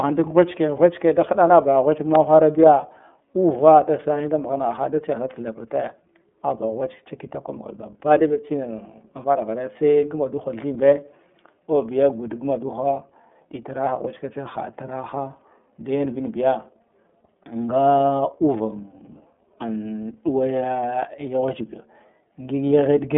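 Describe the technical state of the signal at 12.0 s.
At 12.0 s the speech is still passing through the iLBC codec that covers the whole clip. It codes each 30 ms frame's excitation independently, which fits its 13.33 kbps mode. Nothing above 3.7 kHz survives, so the speech sounds narrowband, plainly rough and synthetic.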